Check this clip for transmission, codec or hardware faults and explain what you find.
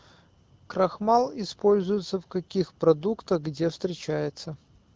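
Nothing here points to a transmission, codec or hardware fault: the speech comes through an AMR wideband (HD Voice) link at 12.65 kbit/s, which sounds as expected at that rate, with only the light coding character normal for it.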